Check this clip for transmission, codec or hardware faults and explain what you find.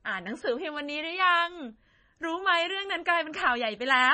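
One fault runs through the whole speech clip. From start to finish, the likely cause is heavy MP3 compression at a starved rate that fits about 24 kbps. Short of bits, the encoder cuts everything above 9 kHz and lets weak frequency lines drop in and out between frames. The speech sounds dull, watery and swirly, with smeared consonant attacks.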